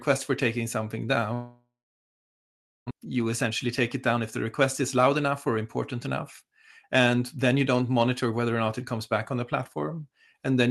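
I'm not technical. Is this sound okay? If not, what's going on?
No. Right after "for taking something", at 1.33 s, the sound turns into a fading buzz and then goes quiet until 2.93 s, and about a second of speech never returns. This is likely a long network dropout: audio stopped arriving, so the gap was filled and the missing part skipped.

From 2.94 to 8.47 s the speech runs about 9% fast while keeping its normal pitch, so it sounds a bit hurried. This is a jitter buffer speed-up: after the gap, the receiver held too much delayed audio and caught up by trimming tiny slices, roughly half a second in total.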